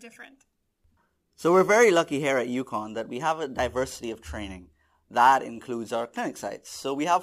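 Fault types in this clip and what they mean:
Crude rate conversion: present throughout the speech. Samples appear to have been dropped with no filtering, which fits a 48 kHz to 44.1 kHz change. That leaves a patterned error roughly 30 dB below the speech, heard as gritty, inharmonic fizz on louder, brighter sounds.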